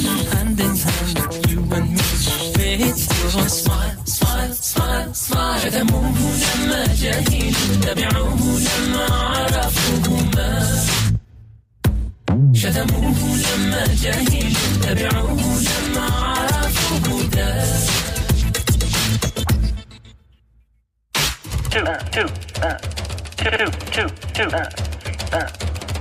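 At 11.07 to 11.09 s the sound jumps abruptly forward with no gap. This is a skip ahead: roughly seven tenths of a second of audio was dropped and the two sides were butted together. From 11.18 to 12.53 s the sound hurries at 112% speed without any pitch change, and again from 18.14 to 18.77 s at 106%. This is a jitter buffer speed-up, where short pitch-period slices were trimmed to shed excess buffered delay, roughly a fifth of a second the first time and a few hundredths the second.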